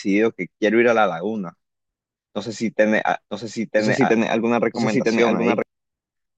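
A doubled audio track runs from 3.30 to 5.62 s in this speech clip: a second full-band copy, about as loud as the original, trails roughly a second behind, with no decay or room colour. It starts and stops abruptly, likely from a slower second capture path.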